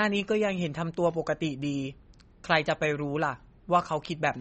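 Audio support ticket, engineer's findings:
MP3 compression, whole clip, 0 to 4.4 s. Speech band-limited, nothing above 8.3 kHz; watery, swirly texture, metallic chirps on s sounds, smeared onsets. Likely a starved MP3 encoder: treble cut at fixed frequency, weak spectral lines dropped frame to frame. Damage plainly audible; fits a low bitrate around 32 kbps.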